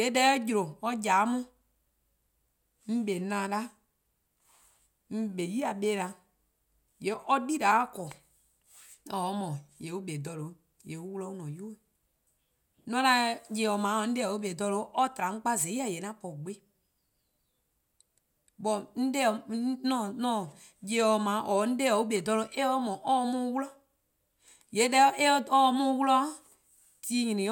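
No technical faults are audible anywhere in the recording.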